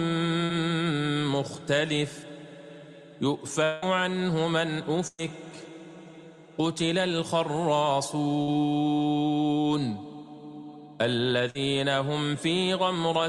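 The audio has three bursts of packet loss, at 0.44–0.50 s, 5.07–5.19 s and 8.42–8.48 s, each losing about 50, 110 and 50 ms. The receiver extends the last sound as a fading buzz or hiss, ending in about 20 ms of silence at 5.19 s, then jumps ahead. On a spectrogram these appear as smeared, repeated bands that dim before a hard cut. From 3.64 to 3.83 s a held, fading buzz or hiss replaces roughly 180 ms of audio, most likely a long network dropout. The waveform shows a smooth, shrinking envelope with no silent floor before the audio resumes further on. Short concealed packet loss causes brief smears at 9.61–9.64 s and 11.50–11.56 s, replacing about 20 and 40 ms. These show as tiny smeared patches in the waveform and spectrogram.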